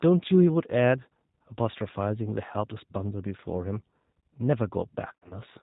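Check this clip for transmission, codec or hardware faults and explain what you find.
Two faults are audible: codec coarseness across the whole clip and a short concealed dropout near the end.

For the full length, the speech sounds rough, slightly synthetic and dull, with nothing above 4 kHz. This is G.729 codec damage, which fits G.729A at 8 kbit/s. The decoder rebuilds each 10 ms frame from a vocal tract filter, a pitch predictor and a few pulses, so fine detail is lost.

From 5.13 to 5.39 s, the speech turns buzzy or noisy and smeared, then weakens. This is VoIP packet loss concealed by the speech codec. About 120 ms of audio went missing across roughly 180 ms, with the longest gap 70 ms. The decoder filled the gaps by extending its last pitch and filter at falling gain.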